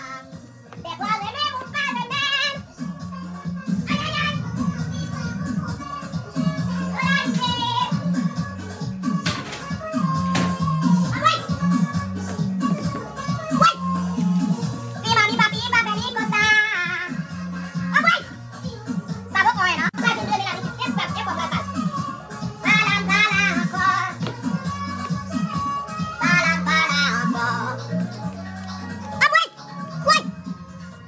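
No technical faults are audible.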